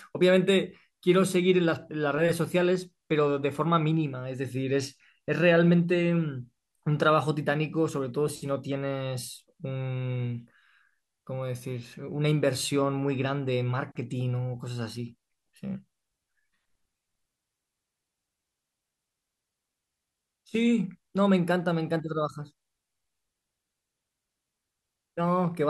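No technical faults can be heard anywhere in this speech recording; the signal stays continuous and stable throughout.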